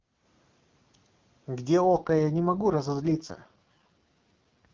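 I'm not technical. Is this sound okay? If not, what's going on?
No. From about 1.83 s to the end of the clip there is an AMR rate drop. This is a phone-network call in HD Voice. Up to that point the speech comes through clearly. Then the network, probably reacting to a weak radio signal, switches the codec to a much lower-quality setting so it can spend more of its data on protecting the call from errors. The sound stays just as full and doesn't break up, but the speech turns rough, raspy and somewhat robotic.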